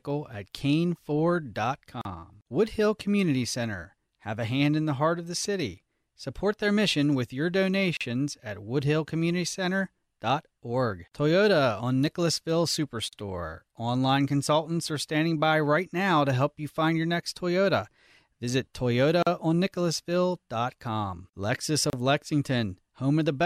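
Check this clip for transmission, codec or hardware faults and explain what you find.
There's one kind of fault in this speech: gaps at joins of encoded pieces. Separately encoded chunks were spliced untrimmed, so encoder start delay and end padding left short dropouts of 30 to 42 ms at 2.01, 7.97, 13.09, 19.23 and 21.90 s. The speech then carries on from where it stopped.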